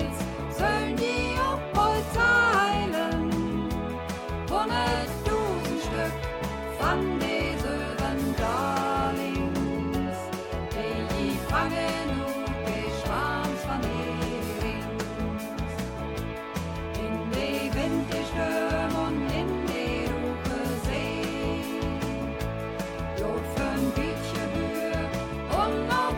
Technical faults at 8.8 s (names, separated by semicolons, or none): none